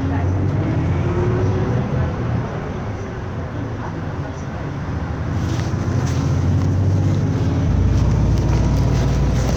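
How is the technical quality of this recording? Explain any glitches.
The recording has one clear fault: mains hum appears from 7.69 s and runs to the end at 9.57 s. A 60 Hz power-line tone leaks in, likely through a ground loop or a nearby transformer, and sits at roughly the same level as the sound. It shows as a bright horizontal line at 60 Hz with some low harmonics on a spectrogram and as a regular low-frequency ripple in the waveform.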